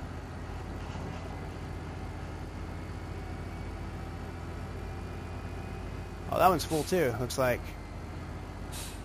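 No technical faults can be heard in this clip.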